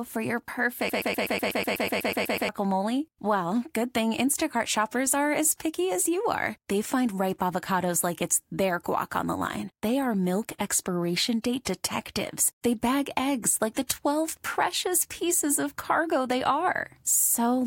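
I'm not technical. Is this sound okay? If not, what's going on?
No. Right after "for your", from 0.9 to 2.49 s, a broken-record loop repeats one 124 ms scrap 13 times. Playback likely stalled, so those words are lost.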